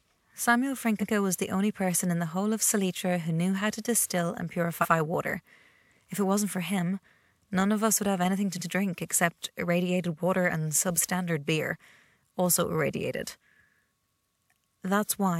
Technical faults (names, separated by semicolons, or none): repeated frames